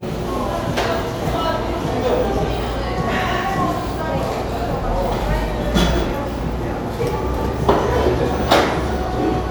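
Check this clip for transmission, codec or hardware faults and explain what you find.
Nothing in this recording of sounds points to a technical problem.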